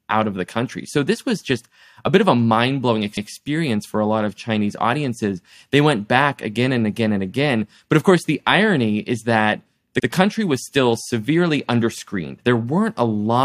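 Speech with repeated frames at 3.16–3.30 s, after "of a mind blowing", and at 9.99–10.06 s, after "the irony is that". Blocks of 139 ms and 70 ms of compressed audio play twice, which sounds like a stutter. Unlike a dropout, nothing goes missing. Each repeat makes the audio longer instead of leaving a gap.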